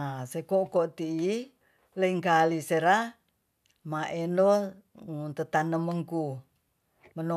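Listening through the speech, nothing stood out as a technical problem at any point.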